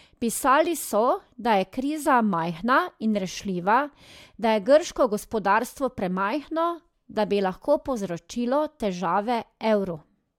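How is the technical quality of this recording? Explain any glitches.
The recording shows no technical glitches; the signal stays continuous and intact across its whole duration.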